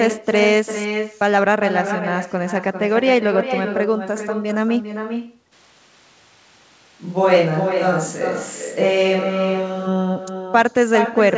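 Echo with no canceller runs through the whole speech clip. The far end is evidently playing the call over a loudspeaker, its microphone picks that sound up, and nothing subtracts it before it travels back. Each phrase is shadowed by a copy arriving about 0.4 s later, only about 7 dB quieter, so it sounds like a thin repeat trailing the talker.

A switch to a distant microphone occurs from 5.54 s to 9.86 s, where the sound turns abruptly hollow and roomy. The likely cause is that the close microphone's feed dropped out and a farther pickup took over. The overall level barely shifts, but the low end thins and room reflections are added, with a faint bed of room noise sitting well below the speech. At 9.86 s the close, dry sound returns just as suddenly. Throughout, the band stops at 8 kHz.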